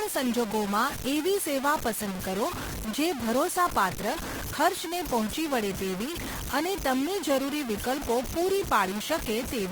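Low bit depth without dither runs throughout: grainy distortion that follows the speech sits roughly 10 dB below it, likely from truncating the audio to 4 bits.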